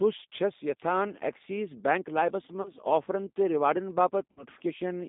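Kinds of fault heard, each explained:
G.729 codec: a low-bitrate coder rebuilds the speech from a filter, pitch predictor and sparse pulses, leaving it rough, synthetic and confined to 200 Hz–3.7 kHz.
VoIP packet loss concealed by the speech codec: the decoder extrapolated over lost packets, so the sound smears into a fading buzzy tone or coloured noise at 2.62–2.71 s and 4.31–4.43 s.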